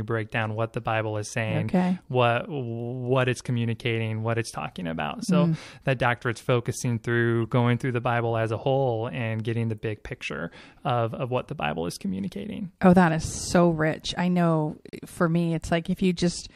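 A speech recording with two short glitches of misplaced energy: a faint one from 7.45 to 7.48 s, after "that doctorate's focusing through", and a louder one from 14.89 to 14.95 s, between "so rich I know" and "for me". Both are a corrupt frame decoded. Damaged bits in a few compressed frames were played back anyway, so wrong gains and codes briefly scattered energy across the spectrum, peaking around -35 dBFS and -20 dBFS respectively.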